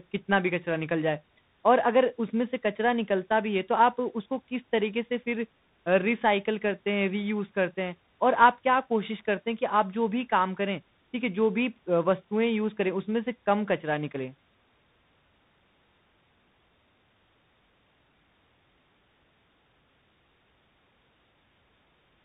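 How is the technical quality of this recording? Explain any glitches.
The quality is poor throughout, because of tandem speech coding. The call passed through two separate CVSD speech coders at 64 kbit/s, with a G.711 A-law leg between them, so the speech was decoded and re-encoded at each border. The second CVSD coder had to track a waveform already roughened by the first, compounding its slope-tracking errors. The result is speech that sounds rough and noisy, with nothing above 3.8 kHz.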